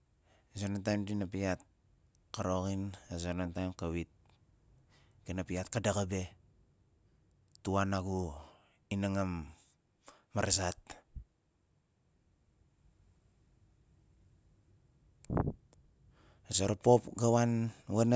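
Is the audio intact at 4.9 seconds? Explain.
Yes, the speech plays through cleanly at 4.9 seconds, with no dropout, click, distortion or other fault to be heard at that moment.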